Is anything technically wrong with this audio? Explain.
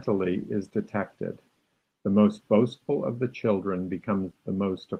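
No, nothing's wrong with this speech clip; it's been through Opus voice compression, and the full band and light touch you hear are what that codec gives when it's working as intended.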